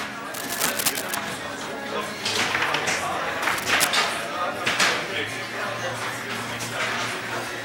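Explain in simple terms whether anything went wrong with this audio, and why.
Two bursts of scratchy, rustling noise break into the audio. The first runs from about 0.32 to 1.15 seconds. The second is shorter, from 3.42 to 3.88 seconds. Each burst is roughly as loud as the sound underneath it, so it stands out clearly. This is cable scratch noise. The likely cause is a worn cable or plug being moved. Its loose contact flickers and lets ragged noise into the signal.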